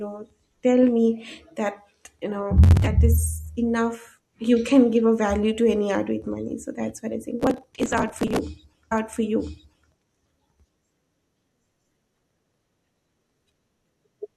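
Speech clip with two bursts of processor overload crackle, at 2.64 to 2.87 s and 7.40 to 8.39 s after "that's what i think". From about 40 to about 100 very short buffers miss their deadlines and are skipped, leaving hard-edged gaps heard as gritty tearing. A stream segment is repeated at 8.91 to 9.91 s: the player queues the same stretch twice, adding about 1.0 s of replayed audio with a blip at the jump.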